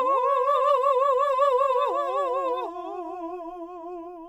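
A doubled audio track runs through the whole of this music clip: a second full-band copy trails the original by roughly 0.7 s, about 5 dB quieter, with no decay or room colour. It is likely a second capture through a slower path, or an edit holding two copies out of step.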